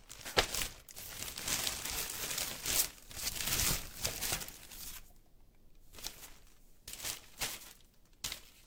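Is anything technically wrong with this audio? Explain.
No, nothing technically wrong can be heard anywhere in this recording.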